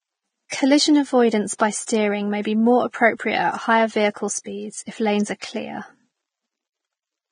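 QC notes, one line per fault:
Throughout: Vorbis compression. The speech is hissy and grainy, with roughened tones and dulled consonant onsets. Nothing is present above 9.7 kHz. This is likely a Vorbis encode at a low setting, which fits a rate of roughly 21 kbps. The codec lowered its cut-off and quantised the upper band so coarsely that fine detail turned into noise of similar energy. A spectrogram shows a hard ceiling at 9.7 kHz and speckled, smeared texture below it.
0.48–0.52 s, 1.58–1.60 s, 1.86 s: pre-echo. Each of these attacks is preceded by a brief hiss lasting 32 ms, 20 ms and 19 ms respectively, and the attack itself sounds softened. The onset landed late in a transform block, so quantisation noise sized for the loud part spread back into the quiet moment before it. On a spectrogram, faint broadband haze leads each onset. On the waveform, low-level fuzz rises just before the transient.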